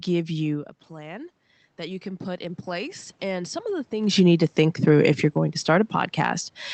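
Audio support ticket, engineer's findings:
Voice and room noise swell, 0.89 s to 3.96 s, about 7 dB, after an input drop of about 13 dB as the talker moved off-mic near 0.5 s. Automatic gain rising: AGC ramping gain slowly, lifting background with speech.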